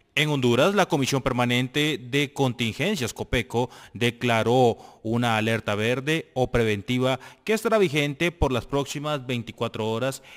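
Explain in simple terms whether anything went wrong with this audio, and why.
Nothing went wrong here that I can hear; the sound stays steady and natural the whole way, with no glitches, gaps or odd noises to point to.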